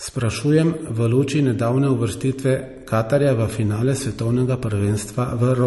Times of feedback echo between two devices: none

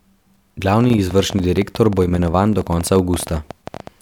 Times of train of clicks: 0.81-3.88

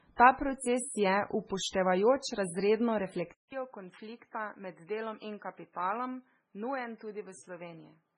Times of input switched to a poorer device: 3.32-8.17

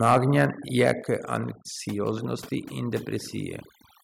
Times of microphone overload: 0.04-0.45, 0.83-0.92

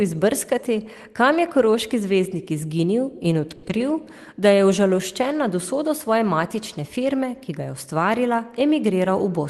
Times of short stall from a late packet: 3.55-3.65

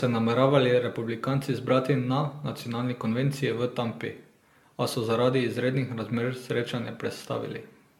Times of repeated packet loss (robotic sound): none

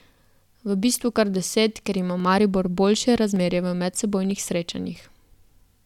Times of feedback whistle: none

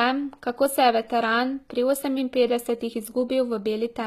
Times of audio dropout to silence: none

